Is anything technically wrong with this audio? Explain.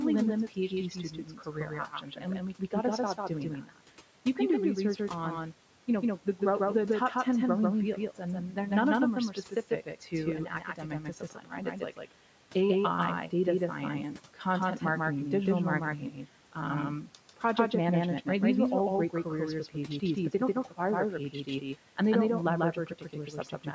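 Yes, two kinds of fault are audible.

Doubled audio track, throughout: a second full-band copy of the speech runs at roughly the same level, about 150 ms behind the first, with no decay or room colour. The likely cause is the signal being captured again through a slower path, or two out-of-step copies left in an edit. The result is a constant hard slapback.

Speech cut by the noise suppressor, at 0.48 to 3.77 s, 8.15 to 8.71 s (just before "of them are"), 9.29 to 12.12 s (right after "of them are"), 14.34 to 14.82 s (between "data science" and "marketing digital"), 16.01 to 17.43 s, 19.1 to 20.79 s, 21.32 to 21.98 s and 22.73 to 23.67 s. The suppressor mistakes parts of the speech for background noise and turns them down by about 10 to 12 dB. Consonants and word endings sound swallowed. The longest losses are in the first and third spans, about a second or more each.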